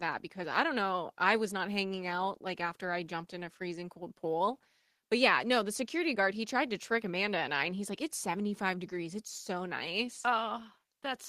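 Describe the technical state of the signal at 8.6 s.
At 8.6 s the speech signal is intact, with no audible fault at that moment.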